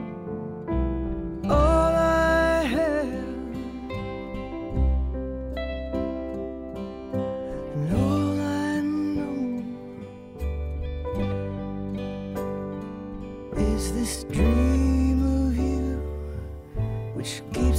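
No technical faults can be heard in this clip. Nothing at any point breaks from the sound around it.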